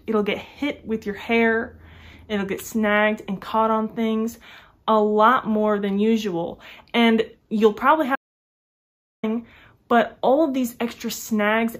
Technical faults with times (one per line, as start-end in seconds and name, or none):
8.15-9.23 audio dropout to silence